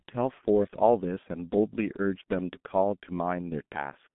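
A speech recording, carried throughout by the G.723.1 codec. The sound sits in a narrow telephone band, roughly 150 Hz to 3.5 kHz, with nothing above 3.8 kHz. It is muffled and lacks air. The damage is heavy. Voicing turns hoarse and consonants smear together, because the codec rebuilds sound from a coarse model updated only every 30 ms frame. The muffled, hoarse texture fits a very low bitrate near 6 kbit/s.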